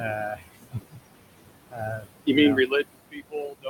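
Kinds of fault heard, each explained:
Noise suppressor artifacts: Present throughout. The suppressor tracks the steady room noise, which sits about 12 dB below the speech, and pulls down every frequency band it judges to be noise, frame by frame, by about 21 dB. The background sinks away between phrases and rises again beneath the speech.
Speech cut by the noise suppressor: Heard at 0.34–0.98 s, 1.25–1.5 s, 1.7–2.28 s and from 2.93 s to the end. In these spans the suppressor mistakes parts of the speech itself for noise and lowers them with the background, by about 20 to 22 dB at the deepest point. A few hundred milliseconds within each of the first three spans are affected, so softer stretches come across swallowed or faint instead of fully present.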